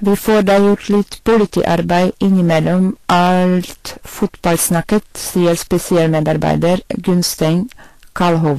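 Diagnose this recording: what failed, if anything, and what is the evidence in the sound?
A gain stage, converter or sample-format conversion was driven about 17 dB beyond what it could pass, so peaks are sliced flat throughout the speech, with roughly a tenth of the samples cut. This is hard clipping. The flat tops add high harmonics, heard as fuzz on every loud syllable.

The codec stage was likely Vorbis at a low setting. Nothing reaches above 14.1 kHz, and the treble is plainly hissy and grainy throughout, which fits a bitrate near 38 kbps. Coarse quantisation of the detail above the smooth spectral floor replaced fine texture with noise.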